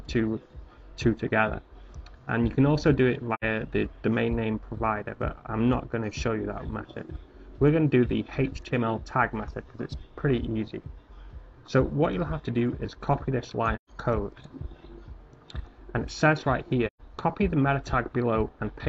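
AAC frame loss with muting drops the decoder's spectrum to zero, leaving soft-edged fading holes at 3.34–3.44 s (about 85 ms, which fits two lost frames), 13.75–13.90 s and 16.87–17.01 s (about 128 ms each, fitting three).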